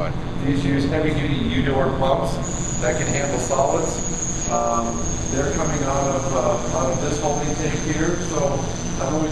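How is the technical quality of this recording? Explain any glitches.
The recording has a clear technical fault that runs through the whole clip. Overlap-add ripple is present from start to finish: the audio was split into windowed frames and rejoined with an overlap whose windows do not add up to a steady gain, so the level swells and dips once per frame. Here the dips reach about 11 dB, repeating around 150 times a second, which comes across as a metallic buzz with extra tones around each note, laid over every sound.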